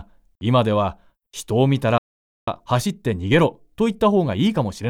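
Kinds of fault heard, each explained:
Playback stall: at 1.98 s the speech drops to silence for about 0.49 s, likely because the player ran short of data or its thread was blocked.
Time-compressed catch-up: from 2.48 s to 4.88 s the speech runs about 1.15 times fast at normal pitch, small pieces cut and cross-faded.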